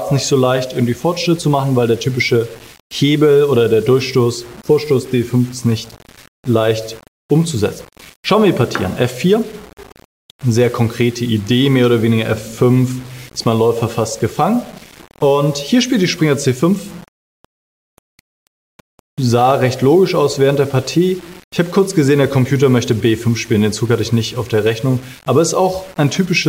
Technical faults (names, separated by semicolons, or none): low bit depth without dither